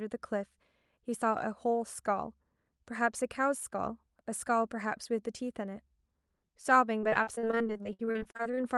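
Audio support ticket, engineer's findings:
Choppy, robotic speech with pieces missing, 6.99 to 8.59 s. Repeated packet loss in the jitter buffer and concealment stage: 28 short holes, the longest about 59 ms, each patched by extending the previous sound. Roughly 38% of that stretch is concealed. WebRTC call path with the Opus codec is not at fault. The top end stops near 12 kHz, and the usual coding noise fits the 48 kbps bitrate.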